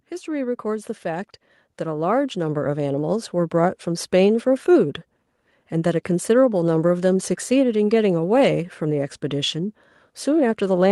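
Automatic gain rising runs from 0.24 s to 4.15 s. The gain control judged the speech input too quiet and kept pushing its gain upward, by about 10 dB over nearly four seconds, so the voice and the room noise behind it swell louder together.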